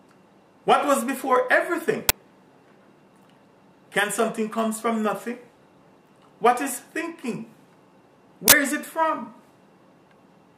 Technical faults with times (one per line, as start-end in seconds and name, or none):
2.09 uninitialised buffer
8.48-8.52 uninitialised buffer